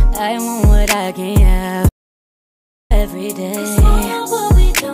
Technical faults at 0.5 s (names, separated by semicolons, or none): none